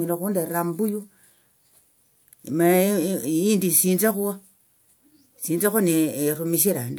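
No technical faults can be heard anywhere in this speech recording. Nothing in the audio stands out as damaged, interrupted or distorted at any point.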